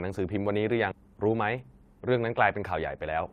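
A speech clip in which queued audio was dropped at 0.91 to 0.93 s, producing a skip ahead: roughly 0.7 s of speech vanishes with no fill, and the sound on either side of the jump is spliced almost directly together. Right afterwards the buffer was still holding more than its target, so from 1.01 to 1.94 s the receiver applied a jitter buffer speed-up, repeatedly trimming short pitch-period slices, about a tenth of a second in total, which makes the speech run at about 110% speed with unchanged pitch and sound rushed.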